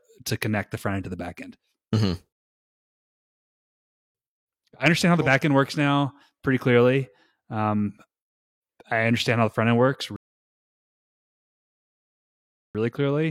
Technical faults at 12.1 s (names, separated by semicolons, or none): rebuffering stall